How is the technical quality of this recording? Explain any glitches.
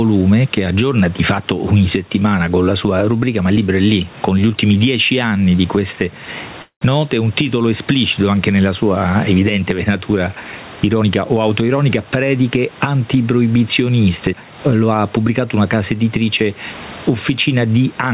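The recording has three clear problems: pumping level throughout, a brief stall just after 6.6 s, and a hurried stretch near 11 to 12.7 s, all heard through a narrow telephone-style band that stops around 4 kHz, which fits a G.711 call codec.

Gain pumping runs through the whole clip. Loud and soft parts are pressed closer together and the sound is squashed, with the level swinging by about 15 dB. The likely cause is input gain set far too high, with a fast limiter clamping down on each peak.

A call audio freeze occurs from 6.62 to 6.91 s. The sound stalls into a fading buzz for about 190 ms, part of it going fully silent for roughly 110 ms, then resumes where it stopped. The likely cause is delayed packets draining the jitter buffer, inserting a gap without losing speech.

A jitter buffer speed-up runs from 11.0 to 12.69 s. The speech plays about 12% fast at unchanged pitch and sounds rushed. 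Having built up excess audio, the receiver trimmed many tiny pitch-period slices, roughly a fifth of a second in total, to shrink its delay.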